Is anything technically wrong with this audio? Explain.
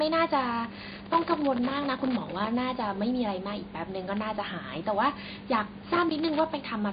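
Yes, there's loose connector crackle from 0.72 to 2.47 s and again from 5.93 to 6.39 s: a dirty or worn contact chopping the speech into scratchy, irregular pops, while the room noise sits about 30 dB down.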